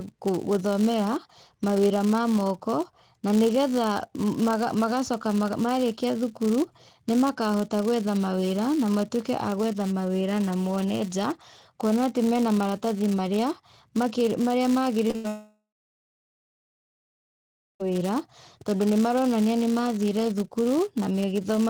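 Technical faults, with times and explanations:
Throughout: filter restarted on every block. The filter loses its state at each block boundary and starts again from silence, leaving a small transient at every block. These form a steady buzz near 188 Hz that rises and falls with the speech level, which fits a 256-sample block.
15.07 to 15.16 s: short concealed packet loss, twice in a row. Twice, about 20 ms of audio failed to arrive in time, and the receiver extended the preceding sound to cover each hole before blending back. The result is a brief smear and wobble rather than a clean gap.
15.16 to 15.26 s: burst of packet loss. About 80 ms went missing at once, so the receiver kept continuing the last sound while turning it down. This is heard as a held buzz or fading hiss, and the speech resumes with that stretch gone.
15.28 to 17.86 s: long network dropout, likely. The last sound is drawn out and fades, then roughly two seconds of silence follow before the audio returns further on. 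About 2.5 s of the speech never plays, so the passage jumps ahead.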